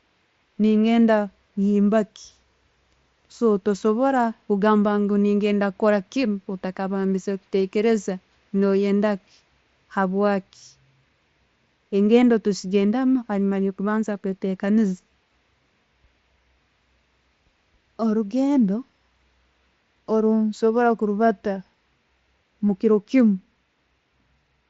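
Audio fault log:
No faults are heard in this speech. It comes over a Bluetooth mSBC headset link, with the sound reaching up to about 8 kHz and a light graininess on the loudest moments.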